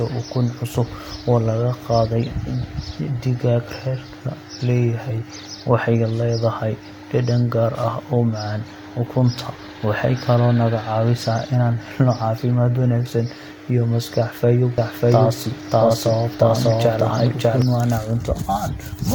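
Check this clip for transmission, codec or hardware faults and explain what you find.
One fault shows up in this speech clip. A doubled audio track runs from 14.78 to 17.62 s, likely from a second, slower capture path: an equally loud, dry copy trails by roughly 0.7 s, starting and stopping abruptly.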